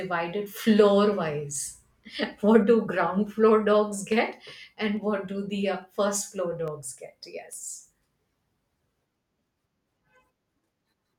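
Speech with regular clicks every 0.85 s from 0.7 to 10.95 s, clock drift buffer slips likely caused by a mismatch of a couple of hundred ppm dropping or repeating a few samples each time.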